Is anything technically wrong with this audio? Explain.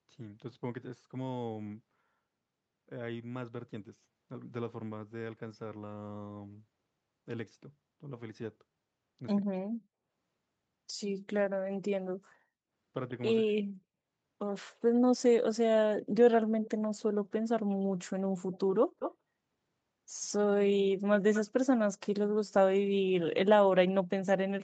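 Yes. The speech has two kinds of fault: brief dropouts and delayed repeats.

Speech suppressed in double talk: from 9.46 to 9.62 s and again from 13.41 to 13.68 s, the voice sinks by as much as about 40 dB, nearly vanishing for roughly 150 ms and then roughly 300 ms. The likely cause is an echo canceller facing both sides talking at once. Unable to tell its own talker from the loudspeaker return, it attenuated everything.

Echo leak: delayed copies of the voice surface at 16.65 to 16.70 s, 18.52 to 18.59 s, 18.99 to 19.15 s and 21.33 to 21.41 s. They trail the original by 140 ms in the first case and 216 ms in the rest. They sit about 20, 30, 10 and 15 dB below the speech, so the one near 19.0 s is the most audible. These are likely residue that a loudspeaker-side echo canceller failed to remove and sent back, heard as short scraps within the band-limited call audio that stops at 8 kHz.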